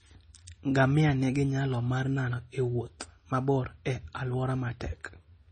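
Throughout the speech, the sound is watery and swirly, with heavy damage. Nothing is heard above 9 kHz. This is likely MP3 compression at a very low bitrate, which fits roughly 24 kbps. Starved of bits, the encoder cuts all treble above that fixed point. It also drops weak frequency lines, which flicker on and off between frames. That flicker causes the swirl. S sounds turn metallic and chirpy, and sharp onsets smear.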